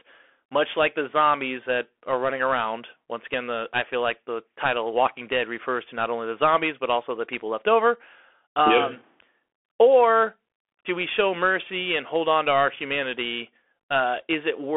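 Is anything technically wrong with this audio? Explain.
Yes. Throughout the speech there is Bluetooth CVSD headset codec damage. Each sample is coded as a single up-or-down bit with an adapting step, fitting a 64 kbps stream, inside a 300 Hz to 3.4 kHz band. Unlike plain telephone band-limiting, it adds a granular hiss, scratchy s sounds, and distortion where loud high sounds outrun the step.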